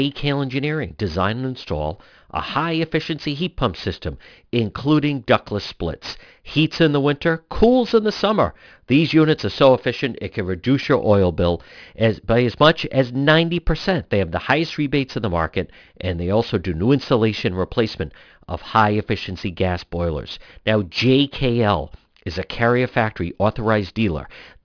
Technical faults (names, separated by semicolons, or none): aliasing